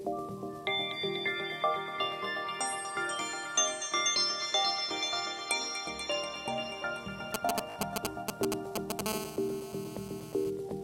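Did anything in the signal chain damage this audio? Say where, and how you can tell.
Yes. GSM signalling bursts, 7.34 to 9.01 s, in the analogue wiring: galloping groups of short 217 Hz buzzes, louder than the audio, as a nearby phone's radio pulses get rectified.

Bluetooth stutter, 7.70 to 7.76 s, on the wireless link: a short slice replays for about 56 ms, which points to a few lost packets while the receiver repeats its last buffer.

GSM phone buzz, 9.06 to 10.5 s, in the analogue wiring: a steady, raspy 217 Hz buzz about 8 dB below the audio, from a phone's call-time bursts being rectified.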